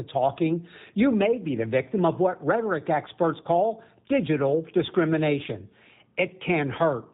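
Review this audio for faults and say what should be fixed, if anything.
The speech sounds rough, slightly synthetic and dull throughout, with nothing above 4 kHz. This fits the G.729 codec at 8 kbit/s, which rebuilds each frame from a vocal-tract filter and a few pulses. To prevent this, use a wideband codec such as G.722 or Opus.

Right after "of what rhetoric experts", from 3.42 to 3.48 s, the sound smears into a fading buzzy tone or coloured noise. This is VoIP packet loss concealed by the speech codec. About 30 ms went missing, consistent with one lost packet, so the decoder stretched its last pitch and filter and the following frames stayed weak or distorted while it recovered. To prevent this, reduce network loss with QoS prioritisation or add forward error correction and a jitter buffer.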